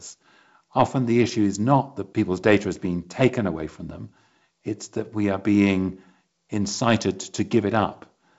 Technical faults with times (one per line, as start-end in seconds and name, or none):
none